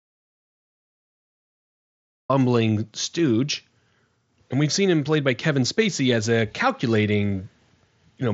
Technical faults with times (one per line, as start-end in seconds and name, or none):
0.00-2.29 audio dropout to silence